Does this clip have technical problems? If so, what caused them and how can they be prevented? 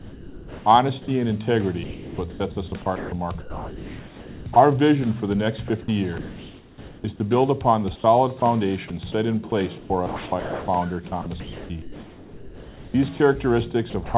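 Yes. The problems most likely come from the sender's voice detector, which repeatedly judged parts of the signal to be silence and stopped transmitting them. The receiver then filled those gaps with synthetic comfort noise. This sound chopped by the voice detector occurs at 0.0–1.08, 1.84–4.56, 5.68–7.04, 8.4–8.9, 9.5–10.68, 11.22–13.2 and 13.9–14.14 s. Quiet edges and softer passages drop out, up to about 1.8 s in the 1.84–4.56 s stretch. To prevent it, disable the voice detector or lower its threshold and lengthen its hangover time so quiet material keeps being sent.

Between 9.07 and 9.09 s, chunks play out of order. A 10 ms block of audio was delivered one chunk late, so it plays after the block that should follow it. Nothing is missing, but the sequence is swapped and the three hard joins produce a brief jumbled moment. To prevent it, reorder packets by sequence number in the jitter buffer, or write audio strictly in timestamp order, before playback.

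The call path's band ends at 4 kHz, which fits a narrowband G.711 codec.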